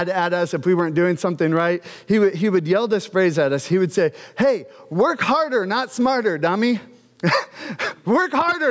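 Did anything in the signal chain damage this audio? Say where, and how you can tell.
Yes. Gain pumping runs through the whole clip, with the level swinging by roughly 15 dB. The likely cause is microphone input gain set far too high, with a fast limiter or compressor in the call processing stage clamping down on each loud sound and releasing in the gaps. Loud and quiet passages end up squashed close together. The band stopping at about 8 kHz is the call's normal processing.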